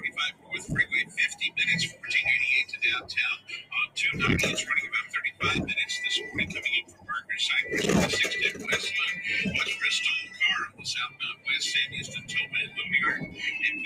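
Noise suppressor applied to music or sounds, throughout: a speech-tuned suppressor treats sustained parts as noise and turns them down, so levels pump by roughly 15 dB.

Sound cut by the noise suppressor at 0.0–2.07 s, 2.65–3.97 s, 5.03–5.42 s, 6.26–7.3 s and 10.25–13.43 s: held portions and decays sink, by up to about 18 dB.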